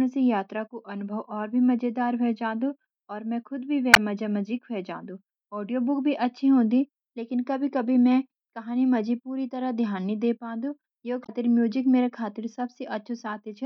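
Speech with two short bursts of damaged data in a compressed stream: 3.91–3.97 s, between "और मैं खुद भी" and "मजा मजी ख्वे जांदो", and 11.22–11.30 s. Corrupted frames make the decoder misread them and lose sync, causing a brief glitch. Each shows as a broadband vertical smear on a spectrogram and an abrupt waveform discontinuity.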